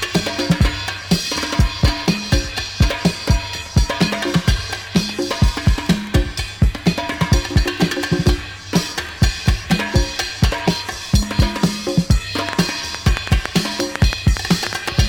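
From 12.49 to 14.90 s, a train of clicks ticks over the sound, around fifteen unevenly spaced pops at roughly 5.4 per second and about 20 dB above it, likely from interference or a faulty connection or power supply.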